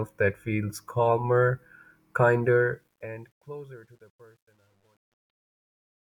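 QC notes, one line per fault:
2.43–6.08 s, truncation distortion on the fade: the fade-out starting around 2.4 s gets gritty as it drops, and from 3.44 s to the end it is at its worst. The gain stage is rounding to too few levels with no dither, which fits roughly 10 bits. Near the bottom of the fade the quiet speech gets chopped into coarse square steps that buzz.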